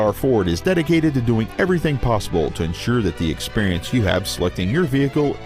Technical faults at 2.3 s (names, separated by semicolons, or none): none